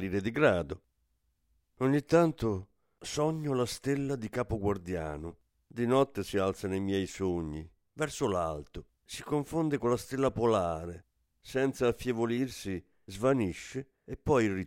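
No technical faults can be heard anywhere in this speech recording. Nothing in the sound points to a break, distortion or other problem at any moment.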